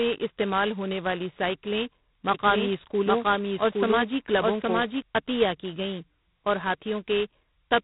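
A speech recording coded throughout with G.726 ADPCM, which fits its low 16 kbit/s mode, leaves a harsh, rasping hiss riding the speech level, with nothing above 3.9 kHz. From 2.34 s, just after "استعمال ہونے والی سائیکلیں", to 5.02 s, before "عطیہ کی گئیں اور", a doubled audio track, likely from a second capture path or a misaligned edit, adds a dry copy at about equal level, trailing by roughly 0.7 s and starting and stopping abruptly.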